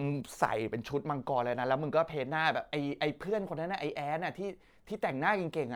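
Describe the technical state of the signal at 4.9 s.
At 4.9 s the signal is intact, with no audible fault at that moment.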